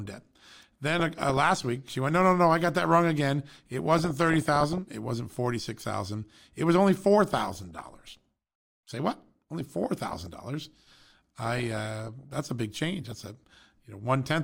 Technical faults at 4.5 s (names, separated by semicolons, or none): DAB burbling